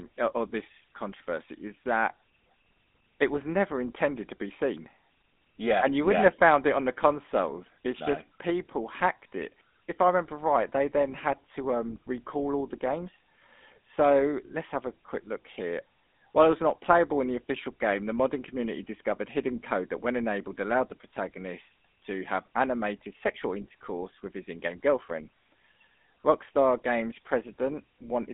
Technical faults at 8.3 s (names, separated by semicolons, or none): GSM full-rate codec